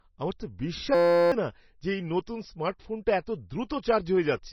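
Across the whole speech clip the sound is dull and watery, with nothing above 5.9 kHz and a swirling, unstable texture on the sibilants. This is heavy MP3 compression, likely at a very low bitrate of around 24 kbps. Starved of bits, the encoder has cut the treble at a fixed point and is dropping weaker frequency lines that switch on and off from frame to frame, which produces the swirl.

From 0.95 s to 1.32 s, right after "আমার তো", the speech gives way to a steady buzz pitched at 172 Hz before resuming at "না যে এই নতুন". This is a system hang loop. The computer or driver froze while the sound hardware kept replaying one 5.8 ms stretch of audio dozens of times, which fits a 256-sample buffer. Roughly 0.4 s of the real speech is lost under the buzz.

At 3.69 s a short burst of hiss arrives just ahead of a sharp onset, which sounds softened rather than crisp. This is pre-echo. The attack fell late within a codec transform block, and the quantisation noise sized for the loud part was spread across the whole block. 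That noise leaks about 11 ms ahead of the attack into the quiet moment before it.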